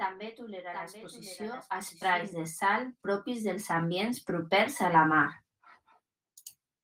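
A second copy of the speech was likely captured by a slower path, giving a doubled audio track: from the start to 2.2 s, a clean echo trails about 0.7 s behind, roughly 10 dB quieter, then stops abruptly.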